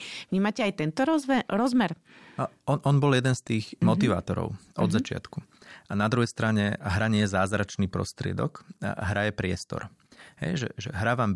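No technical faults can be heard anywhere in this recording of speech.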